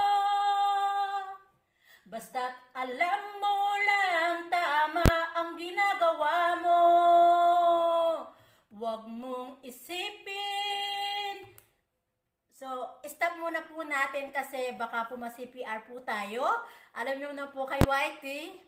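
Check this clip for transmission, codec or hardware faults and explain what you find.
Two faults stand out, both of one kind: invalid numbers at full scale. They occur at 5.06 to 5.08 s and at 17.81 to 17.84 s. Each lasts about 21 ms, which fits a 1024-sample processing block. A calculation produced infinite or invalid values. These were pinned to the largest positive or negative sample. The output then held flat at one extreme value, far beyond the audio's peaks, for the whole block. The block is so short that each event is heard as a single loud bang.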